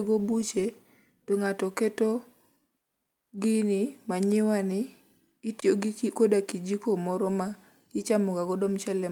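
A brief gap at 5.60 s, just before "gi koda kijiko moro", is a 20 ms block of digital silence: the sound cuts out and back with no fade.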